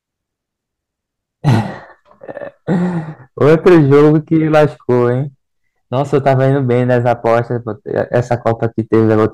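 At 1.48 to 1.55 s the speech briefly overruns the signal path by about 5 dB, and hard clipping flattens its peaks into a short crackle. The same fault returns for longer stretches at 3.41 to 5.09 s (about 9 dB over, the harshest fuzz), 5.96 to 7.39 s and 7.98 to 9.26 s (each about 6 dB). The waveform shows squared-off tops, while the spectrogram shows bright vertical smears of added harmonics reaching far up the spectrum.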